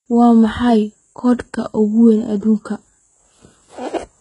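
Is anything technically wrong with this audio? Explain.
Yes. Throughout the speech the treble sounds false: s sounds come out gritty and lispy with a metallic sheen, and nothing reaches above 11 kHz. This is likely HE-AAC compression, and the heavy damage points to a very low bitrate, around 12 kbps. The codec keeps only the lower spectrum and fills in the upper range by copying lower bands upward under a coarse envelope, so the rebuilt harmonics don't match the real ones across that join.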